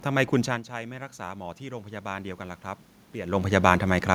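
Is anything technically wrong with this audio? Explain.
Yes, there's automatic gain rising from 0.44 to 3.61 s. Around half a second in the talker moves away and the speech drops by about 15 dB at the mic. The AGC sees a quieter input and slowly pushes its gain up by about 5 dB over those three seconds. You hear the voice and the room noise swell together, the background creeping up along with the speech, until about 3.6 s, with the talker moving again around 3 s.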